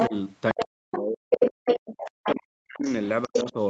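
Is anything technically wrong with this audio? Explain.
Yes, echo and double-talk problems run through most of the clip.

Other side's voice leaking through, at 0.00–0.17 s, 0.50–0.98 s, 1.31–2.31 s and 2.87–3.52 s: a second voice, likely loudspeaker playback the echo canceller failed to remove, sits at roughly the talker's level, sometimes slightly quieter, sometimes slightly louder.

Speech suppressed in double talk, at 0.08–0.13 s, 0.53–1.67 s, 2.13–2.88 s and 3.27–3.57 s: when both sides overlap, the canceller likely turns everything down. The talker's voice dips, by about 10 dB at first, later almost to silence for up to about a second.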